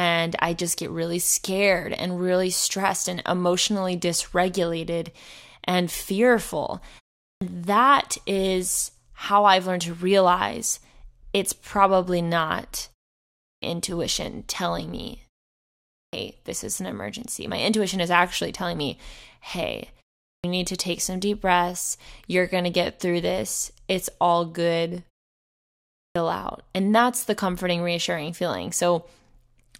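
Clipped start after a pause occurs at 7.23, 13.44, 15.94, 20.27 and 25.97 s. Each time the playback device drops into a low-power state during a short silence of 0.31 to 0.95 s and needs about 170 to 190 ms to wake and resume output. Around 7.2 s, after "emotionally dysregulated and fearful", the phrase "that is how I've" bursts in with its onset missing. The same abrupt start is heard on "this is an emergency" near 16.1 s and on "need to take some" after "actually telling me hey".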